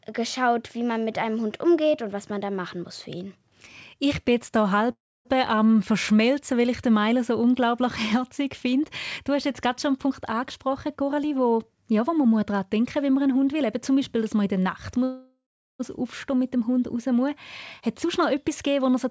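Just after "bin jetzt hier", from 4.92 to 5.27 s, there is a call audio freeze: the last sound is stretched into a short fading buzz, then about 0.28 s of silence, before the speech resumes where it stopped. The likely cause is packets held up in transit, with the jitter buffer running dry. Nothing is lost, but 0.33 s is inserted. On a spectrogram the final frame smears horizontally, then goes blank. The waveform shows a decaying tail and then a flat line.

After "jetzt gerade schon einen", from 10.05 to 13.61 s, a jitter buffer speed-up plays the speech at 109% of normal speed with no change in pitch. The receiver trims many pitch-period slices to work off excess delay, roughly 0.3 s in total, so the phrase sounds hurried. Harmonic spacing on the spectrogram is unchanged, but the syllables are compressed in time.

A second call audio freeze runs from 15.04 to 15.81 s. It has the same fading continuation followed by about 0.37 s of silence, and adds 0.76 s of gap.

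Following "raus muss", from 17.8 to 19.06 s, another speed-up runs at 107%, removing about a tenth of a second. The whole call path has no energy above 8 kHz, which fits G.722 at 64 kbps.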